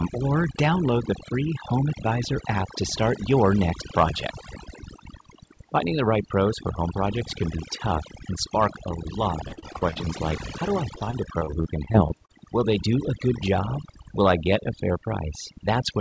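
Speech, with overdone noise removal throughout. The background drops and breaks up into twinkling specks. An aggressive noise reducer is pushing individual frequency bands down whenever they sit near its noise estimate. Quieter parts of the voice get pulled down along with the noise. Nothing reaches above 8 kHz, which fits a wideband call codec such as G.722.

Repeated packet loss gives a choppy, robotic sound in two stretches. The first runs from 9.48 to 10.21 s, just after "and spark a lot" and ending at "like how do I". The second runs from 10.95 to 12.31 s, right after "like how do I". Each has a rapid string of short holes, the longest 43 ms in the first and 33 ms in the second. Each hole is patched by extending the last sound. Some pieces are simply gone, about 120 ms and 220 ms in total.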